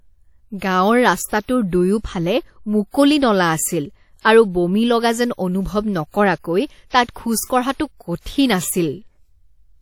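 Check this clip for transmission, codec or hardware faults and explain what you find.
One codec fault is present across the whole clip. WMA compression, throughout: the speech has ringing and a washy hiss that rises and falls with the signal, likely from a transform codec with long blocks smearing quantisation noise over tens of milliseconds and zeroing weak components. The damage is plainly audible, fitting a bitrate around 48 kbps, and nothing remains above 19 kHz.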